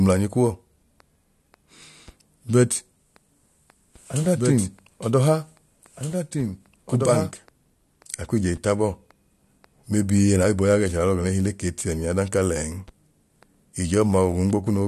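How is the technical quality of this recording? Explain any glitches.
The recording has one glitch, a doubled audio track between 3.95 s and 7.31 s. Across that stretch the speech is layered over a second copy of itself that trails by about two seconds and sits roughly 5 dB lower. The likely cause is the same audio being captured again through a slower path, or an edit leaving two copies out of alignment. The echo is full-band and dry, with no decay or room colour, and it cuts in and out abruptly. On a spectrogram, the speech patterns from two seconds earlier reappear, about 5 dB dimmer, over the current ones. On the waveform, the envelope thickens with overlapping syllable shapes that begin and end with hard edges.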